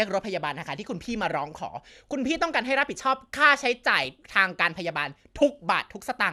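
From 3.93 to 4.06 s the speech is hit by DAB burbling. Weak reception lets bit errors slip past the error correction into the MP2 audio data, at a rate that sounds like a small fraction of a percent. Corrupted samples put short blips of noise into single sub-bands, and corrupted scale factors make sub-bands jump in level for up to a frame, across eight frames. For about 130 ms the speech carries these short blips of noise.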